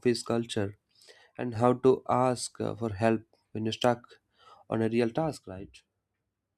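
The speech abruptly drops about 6 dB from 1.07 to 1.55 s and again from 5.37 s to the end, likely one channel dropping out before the mono sum.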